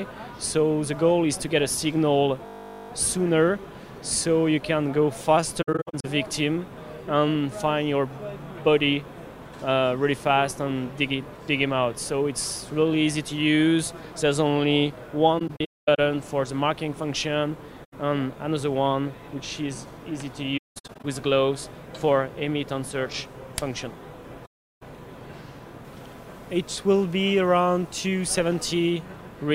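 System hang loop at 2.46 to 2.9 s: playback froze while the hardware replayed one 20 ms slice, giving a steady 50 Hz buzz.

AAC frame loss with muting at 5.62 to 6.05 s, 15.39 to 15.99 s, 17.84 to 17.93 s, 20.57 to 21.05 s, and 24.45 to 24.83 s. The decoder zeroed missing frames, so the sound fades into soft-edged holes. The first, second, and fourth are scattered gaps, with longest runs of about 70, 200, and 200 ms. The third and fifth are single holes of 85 and 363 ms.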